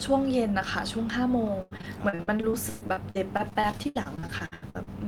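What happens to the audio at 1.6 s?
At 1.61 s, repeated packet loss sets in and lasts until 4.89 s. Short holes, the longest 123 ms, are patched by extending the preceding sound, concealing about a third of the span. The speech sounds choppy, with pieces missing. A spectrogram shows repeated, smeared slices broken by gaps.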